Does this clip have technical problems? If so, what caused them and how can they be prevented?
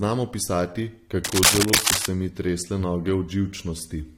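Yes. A worn cable or connector likely shifted, making its contact resistance fluctuate rapidly, so cable scratch noise rasps over the speech from 1.24 to 2.06 s, louder than the speech. Replacing worn leads and keeping cables still while recording prevents it.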